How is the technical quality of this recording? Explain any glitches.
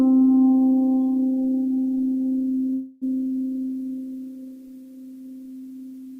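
There's one glitch in the music, a call audio freeze from 2.73 to 3.04 s. The last sound gets stretched into a fading buzz for about 0.28 s, then the music picks up where it left off, with nothing lost, just running 0.28 s later. It's likely the jitter buffer ran dry while packets were delayed.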